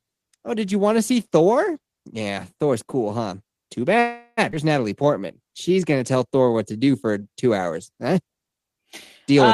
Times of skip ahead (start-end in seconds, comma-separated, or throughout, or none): 4.51-4.54